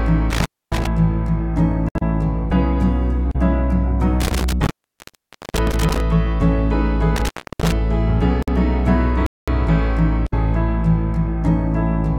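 The audio has three kinds of dropout. Intermittent contact cuts it out three times: 0.30 to 0.87 s, 4.20 to 6.00 s, and 7.16 to 7.72 s. The line stays open for about 262, 874 and 309 ms. A loose cable or plug is breaking the signal path, so each cut has crackle at its edges. A gap at a join of encoded pieces appears at 1.89 s and 8.43 s. These are brief silences of 66 ms and 53 ms with smeared edges. Separately encoded sections were spliced without trimming the encoder's start delay and end padding. The sound then resumes where it left off. A playback stall silences the audio from 9.26 to 9.48 s, for 212 ms, before it carries on. The likely cause is the player running short of data or its thread being blocked.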